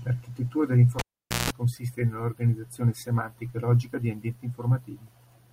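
Cable pulled and plugged in, from 0.99 to 1.50 s: a live connection is broken and remade while the speech is running. A pop marks the pull, then the signal drops to near silence for about 0.47 s. For roughly 0.17 s of that gap, a 60 Hz mains buzz breaks through as only the plug tip makes contact and picks up hum. A second pop lands as the connection seats fully and the speech returns with "consiste nell'organizzazione semantica e".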